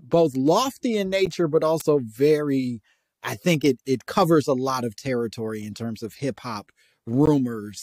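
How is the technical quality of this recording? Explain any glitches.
Three glitches interrupt the speech: two short dropouts at stream segment joins and one electrical spike.

Gaps between stream segments occur at 1.26 s, just after "lofty in", and at 7.26 s, just after "terms of hip hop". The two points are 6.0 s apart, matching the length of each segment. At each join the time stamps of consecutive segments fail to meet, leaving about 10.4 ms of unfilled time at the first and 16.4 ms at the second. The player fills each gap with silence, so the speech cuts out with hard edges and then resumes. Nothing is lost, but the timeline stretches by those few milliseconds.

An electrical switching spike sits at 1.80 s, just before "very I think it". It was likely caused by a nearby switch, motor or static discharge arcing briefly and being picked up by the audio line. The interference lasts about 11 ms. 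It is heard as a sharp snap or a tight cluster of clicks added on top of the speech rather than as a break in it, because the speech continues underneath.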